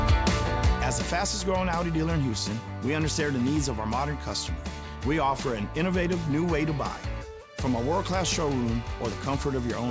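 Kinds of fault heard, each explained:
No faults can be heard in this clip. It has passed through a call path whose wideband codec leaves nothing above 8 kHz, which fits G.722 at 64 kbps.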